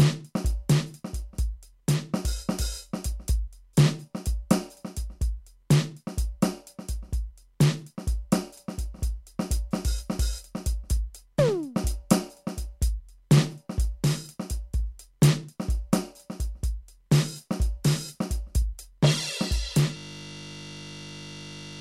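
At 19.97 s the music collapses into a steady 50 Hz buzz that lasts to the end. This is a system hang loop: the system froze while the sound hardware kept replaying one 20 ms slice of its buffer, about ninety times over.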